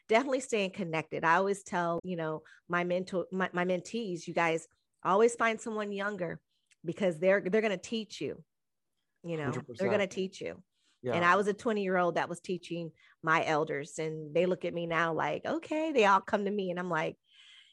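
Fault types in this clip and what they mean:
Damaged data in a compressed stream: part of the coded speech is corrupt, so the decoder misreads frames and loses sync. A glitch runs from 1.96 to 2.05 s, after "staying connected I always". A shorter blip comes at 16.24 s, before "to me".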